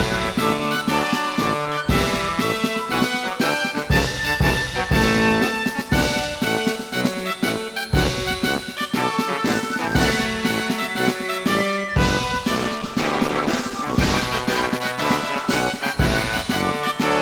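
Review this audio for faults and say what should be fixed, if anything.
A call bitrate drop runs from 12.57 to 16.87 s. The bandwidth estimate fell and the encoder was forced onto far fewer bits, coarsest for 2.24 s. The sound turns rough and dull, which fits a fall from 48 kbps to 15 kbps. Smoother bandwidth estimation and a higher minimum encoder bitrate would stop such steep drops.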